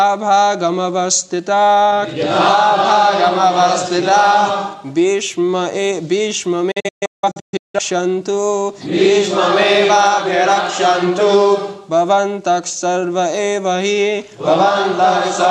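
Between 6.71 and 7.79 s there is a digital broadcast dropout. The receiver stopped getting decodable frames, either because the signal was lost or because frames failed their checksum, so it muted until clean frames arrived again. The audio breaks into a cluster of short holes, each dropping away over about 8 ms, with the longest gap lasting about 170 ms. Roughly 725 ms of material is missing across that one-second stretch, and it never returns.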